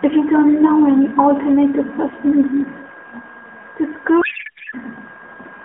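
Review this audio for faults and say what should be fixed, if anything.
From 4.22 to 4.74 s the speech collapses into garbled noise and warble, a codec payload misread: octet-aligned AMR frames are unpacked as bandwidth-efficient, so every field lands wrong. To prevent it, make both ends negotiate and honour the same AMR payload format, including the octet-align setting, for the whole call.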